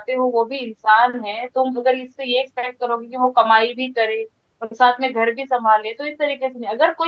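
No technical faults are heard in this speech; the call's microphone processing and Opus codec are working as expected, with nothing above 8 kHz.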